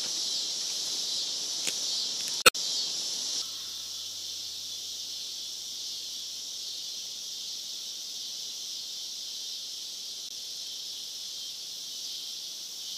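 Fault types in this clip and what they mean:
Damaged data in a compressed stream: corrupted bytes make the decoder misread frames and hunt for the next valid header. This gives a brief disruption at 2.42–2.56 s and a shorter one at 10.27–10.31 s. On a waveform each shows as an abrupt discontinuity.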